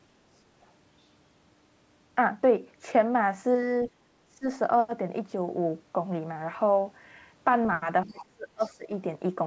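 Other side's voice leaking through, 3.84 to 3.88 s: a brief, faint scrap of a second voice sits about 25 dB under the speech. This is likely loudspeaker playback reaching the microphone that the echo canceller failed to remove.

Background gated by the echo canceller, 3.91 to 4.07 s: right after that scrap, the room sound drops by about 13 dB for roughly a sixth of a second. The canceller clamped the microphone while the loudspeaker was active, and the background returns once it releases.

Speech suppressed in double talk, 4.36 to 4.47 s: the talker's voice dips sharply, around 20 dB, for about a tenth of a second. This is likely the echo canceller mistaking the talker for loudspeaker echo while both sides spoke at once, so it attenuated the near-end voice along with the echo.

Speech suppressed in double talk, 8.06 to 8.93 s: a longer episode of the same kind, with the voice pulled down by up to roughly 25 dB across most of that span. 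The other side's voice leaks through inside this stretch twice. From 8.08 to 8.23 s it sits about 20 dB below the speech, and from 8.61 to 8.69 s it is fainter, about 30 dB down. Both scraps are likely the residue of echo the canceller did not remove while it was busy suppressing the talker.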